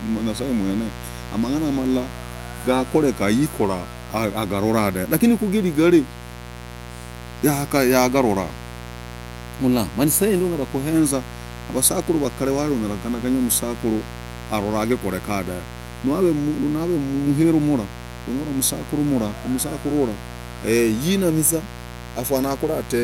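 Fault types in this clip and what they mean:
Mains buzz: a steady, raspy buzz runs under the speech for the whole clip, sitting only about 15 dB below it. Sharp spikes from switching electronics or poor shielding arrive twice per 60 Hz cycle, stacking harmonics up into the kilohertz range.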